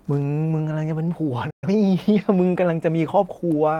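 At 1.07 to 1.09 s a single 20 ms stretch sounds rougher and noisier. This is a lost packet rebuilt from error correction: the decoder played the lower-bitrate copy carried in the following packet, so there is no gap.

From 1.50 to 1.64 s the speech halts abruptly and goes silent for about 120 ms. This is a playback stall, likely from the player running out of data or its thread being blocked.

From 1.64 to 1.76 s the speech runs at twice normal speed at unchanged pitch. This is time-compressed catch-up, where the player clears its backlog by cutting and cross-fading small segments.

At 2.20 to 2.22 s another 20 ms lost packet rebuilt from error correction gives the same brief rough, noisy texture without any dropout.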